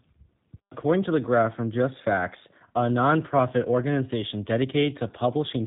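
Throughout, the speech has clear G.729 codec damage: it's rebuilt from pulses at what sounds like 8 kbit/s, with nothing above 4 kHz, so it's rough and faintly synthetic.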